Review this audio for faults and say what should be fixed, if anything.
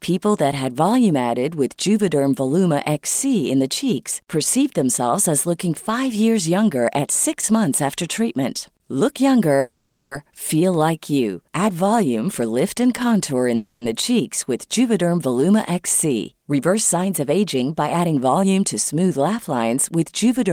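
At 9.59 to 10.14 s, just before "feel like you", the sound stops and the last fragment is drawn out into a fading buzz and then a quarter-second of silence, about 520 ms in all. At 13.55 to 13.84 s, between "lift and contour in" and "the cheeks with", the same stretched tail fills about 260 ms and ends in a brief 30 ms of silence. Nothing is lost afterwards; the speech resumes exactly where it broke off, so each is a call audio freeze, likely caused by delayed packets draining the jitter buffer while the receiver concealed the gap. A jitter buffer with a larger or more adaptive target would ride out these delay spikes without running dry.

From 16.42 to 19.63 s the speech sounds slightly rushed, about 107% of normal speed, with no change in pitch. This is a jitter buffer speed-up. The buffer held more audio than its target, so the receiver trimmed short pitch-period slices again and again, removing about a fifth of a second in total to bring the delay back down. 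Spreading that catch-up more gently over a longer stretch would keep the acceleration from being heard.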